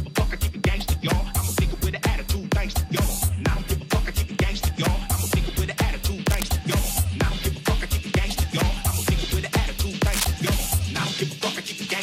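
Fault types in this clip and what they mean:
Cable scratch noise: a worn connector or cable being moved likely makes its contact resistance fluctuate, adding dense, uneven crackle over the sound from 6.26 to 6.43 s at about 10 dB below the signal and 10.06 to 10.25 s, louder, about 5 dB below.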